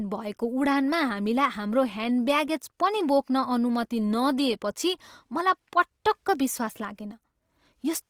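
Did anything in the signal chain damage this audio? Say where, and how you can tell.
Yes. At the codec stage, the speech sounds rough and grainy from start to finish, with tonal detail turning noisy. Content still extends to about 20.4 kHz, which points to likely Opus compression in its CELT music mode at about 24 kbps, filling bit-starved bands with noise.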